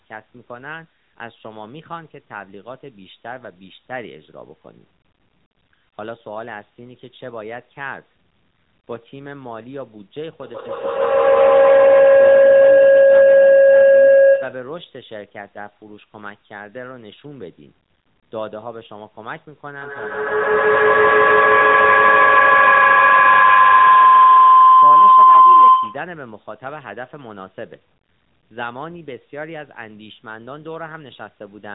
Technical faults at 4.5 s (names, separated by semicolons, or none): AMR narrowband mobile codec